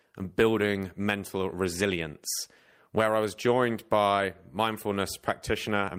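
Nothing here stands out as a technical fault; the speech runs along without any glitch or interruption worth pointing to.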